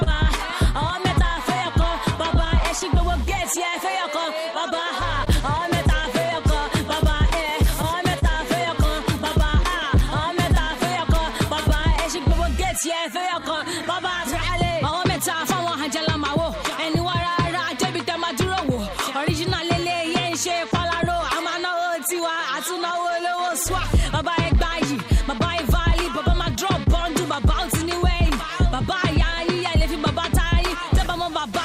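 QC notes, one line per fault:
Throughout: clock drift between sender and receiver. The sending side's clock runs slow, by roughly 2 percent, so the receiver's buffer keeps draining and must be topped up with stretched or repeated material. The result is a faintly unsteady pacing that never settles. Unlike a single late packet, the drift has no one moment of its own. It shows up as the ongoing pattern of small corrections and an occasional stall listed below.
1.23–31.25 s: repeated timing corrections. To keep pace with the slower sender, the receiver repeats tiny pieces all through this span, playing at about 99% speed and adding roughly 0.4 s in total. Each edit goes the same way, lengthening the sound, but they come at uneven intervals. This is heard as a slightly dragging, wavering tempo or soft hiccups, not as clicks. That steady one-way stretching separates it from random packet loss.
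0.03–16.73 s, 18.76–21.83 s, 29.31–31.24 s: scattered short gaps. Across these three stretches, isolated packets arrived late or not at all, about twenty holes in the first stretch and about four in each of the others. The receiver covered each by extending the last sound, so nothing is lost. The longest fill is about 30 ms, in the first stretch, and the later fills are only a few milliseconds. They come across as brief ticks or smears at random spots, not as a steady tempo change.
26.84–26.88 s: short stall from a late packet. One packet missed its slot and the buffer ran dry, so the last sound was held for 29 ms until it arrived, and playback then resumed from the same point. Nothing is skipped, but there is a single held moment with a faint buzzy or dipped texture. Unlike the scattered gaps, it is one isolated event in which the delay grows by 29 ms, which fits a buffer underrun from the slow clock.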